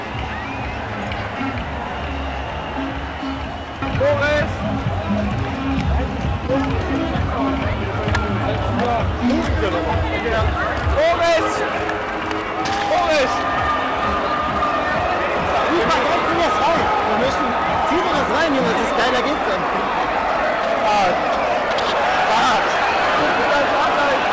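At 6.47–6.59 s a short concealed packet loss occurs. About 20 ms of audio never arrived in time, so the receiver extended the preceding sound for 14 ms, added a few milliseconds to the timeline, then blended back. This is heard as a brief smear or wobble. On a spectrogram the preceding pattern briefly continues unchanged, then blurs at the rejoin. The waveform shows a short, overly uniform patch that blends into the following audio at its end. Throughout, nothing appears above 8 kHz, which fits a wideband call codec such as G.722.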